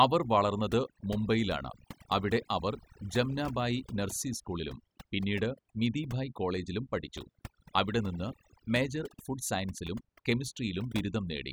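From the first second to the last, you're hearing overdone noise removal. Someone ran a noise reducer far too hard on a noisy recording, so any frequency band sitting near its noise estimate got pulled way down or switched off, and the softer bits of speech got caught in the same net. The gaps between phrases drop to near silence with little twinkling specks.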